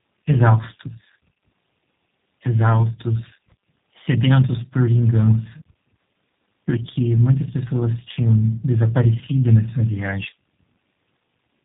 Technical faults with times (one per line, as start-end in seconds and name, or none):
0.00-11.65 tandem speech coding